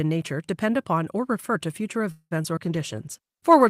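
A speech recording made over a call develops three distinct problems in its last second and a half. Just after "or refer to future", from 2.11 to 2.33 s, there is a call audio freeze. The last sound is drawn out as a fading buzz for roughly 0.2 s and ends in about 40 ms of silence. Playback then resumes exactly where it stopped, so nothing is lost, but everything afterwards now runs about 0.2 s late. The likely cause is packets being held up in transit until the jitter buffer ran dry. That combination of stretched time and intact content is what separates it from the two short concealed packet losses that follow, at 2.43 to 2.46 s and 2.56 to 2.59 s. Each of those removes about 20 ms of real audio. The receiver papers over the holes by extending the preceding sound for 12 ms and 6 ms respectively and then crossfading back, which produces quick smears or wobbles where a fragment of the speech is genuinely gone rather than delayed. 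From 2.61 s to the end of the clip a call bitrate drop takes over. The encoder falls from 32 to 16 kbps after the connection's bandwidth estimate shrinks, and it codes the speech more coarsely. The result is a rougher, watery texture that persists for about 1.1 s. Unlike the brief glitches, this is a sustained change in quality and not a momentary break.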